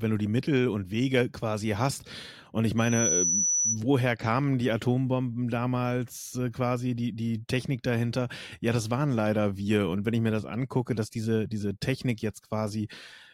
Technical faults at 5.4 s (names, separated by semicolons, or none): none